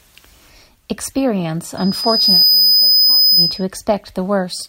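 A microphone was picking up the loudspeaker it was feeding, and at one frequency the loop gain rose above one, so from 1.77 s to 3.65 s the speech is overrun by loudspeaker feedback squeal. The 5 kHz tone grows on itself, swelling from nothing into a piercing whistle in well under a second, and then holds at a level about 10 dB above the speech.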